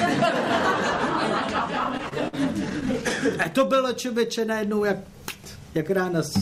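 From 1.79 to 3.47 s, repeated stalls (stutter): the jitter buffer emptied 15 times, each gap of up to 51 ms filled by continuing sound, so it drags without losing anything. From 3.75 to 4.41 s comes a jitter buffer slow-down, where repeated pitch periods add 52 ms, giving 93% speed at unchanged pitch, with drawn-out sounds.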